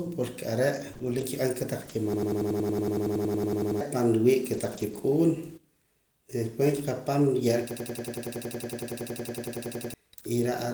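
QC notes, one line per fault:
0.93–4.99 s, scattered short gaps: a few isolated packets, each about 20 ms or less, were lost or late and patched by extending prior sound, leaving brief ticks and smears.
2.14–3.81 s and 7.71–9.94 s, system hang loop: a frozen computer or driver left the hardware replaying one 92.88 ms buffer, consistent with 4096 samples. This produces a 10.8 Hz machine-gun stutter, repeating 18 and then 24 times.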